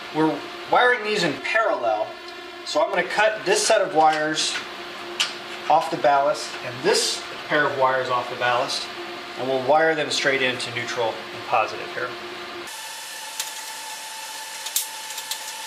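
Channel delay (comb filtering) from 1.39 to 2.94 s makes the sound turn hollow and phasey. One channel arrives roughly 3 ms late, and summing to mono cancels shared content at evenly spaced frequencies, with the first notch near 150 Hz.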